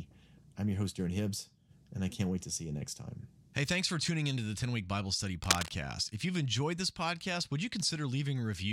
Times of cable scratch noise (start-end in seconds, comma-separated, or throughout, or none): 5.44-5.70